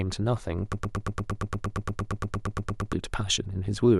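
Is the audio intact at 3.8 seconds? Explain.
Yes, at 3.8 seconds the audio is intact, with no dropout, click, distortion or other fault audible at that moment.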